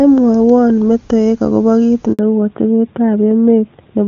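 At 2.13 s the sound cuts out for 60 ms, ending at 2.19 s. This is a handover gap: the call is switched between networks, no speech frames arrive during the changeover, and the voice dies away within a few tens of milliseconds, leaving a short hole where that fragment of speech is lost.

From 2.19 s to the end, a fallback to narrowband sets in. The call leaves the HD Voice path, whose clean, full-bodied sound points to AMR-WB near its top rate, and moves to an older narrowband codec, consistent with AMR-NB at 12.2 kbit/s. Nothing above 4 kHz survives, so the speech turns duller and rougher, losing its crisp sibilance and airy detail.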